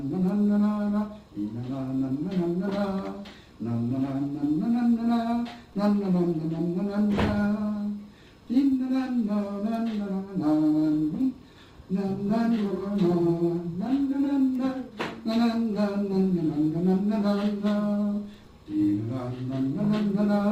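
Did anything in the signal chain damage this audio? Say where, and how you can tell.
No, nothing in the signal chain damaged this audio. There is nothing audible to point to at any stage, from capture through to playback.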